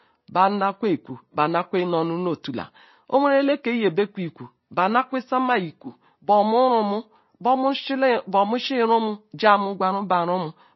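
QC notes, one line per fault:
Throughout, MP3 compression: the speech has nothing above 5.8 kHz and a watery, swirling quality as weak detail flickers in and out, likely a starved encoder at a low rate near 24 kbps. Unlike a plain low-pass filter, it also smears the attacks.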